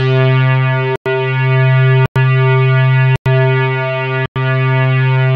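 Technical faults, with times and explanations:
0.96–1.06 s, 2.06–2.16 s, 3.16–3.26 s and 4.26–4.36 s, gap between chunks: the audio arrives in 1-second chunks, and each join has 100 ms of silence inserted after it. Nothing is removed. The sound is pushed later at every join, so it stops abruptly, sits silent for a tenth of a second, and resumes just as sharply. Because the chunk length never varies, the hard-edged holes repeat at a steady interval of about 1.1 s.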